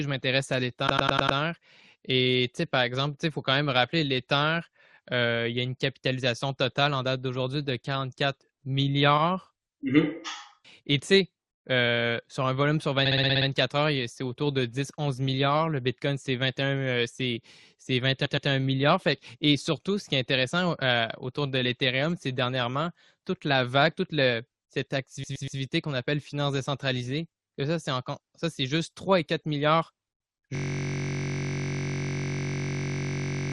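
Repeated frames interrupt the speech at 0.87 s after "je m'intéresse à" (a 100 ms block played five extra times), at 9.17 s (40 ms, once more), at 13.05 s between "sur un volume sur" and "heures c'est autour de" (60 ms, seven more times), at 18.25 s (120 ms, twice) and at 25.23 s after "la vague toute cette" (120 ms, three times). Each is a stutter, and the speech then resumes, so the clip simply runs longer by the repeated time.

From 30.55 s to the end, a system hang loop recycles a single 21.33 ms slice, which fits a 1024-sample buffer, about 140 times. Unlike the brief stutters, it never recovers, and the slice is so short that it fuses into a steady 46.9 Hz buzz.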